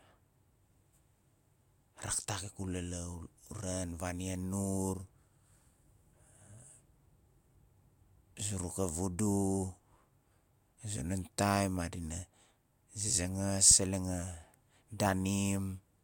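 No technical faults can be heard anywhere in the speech recording.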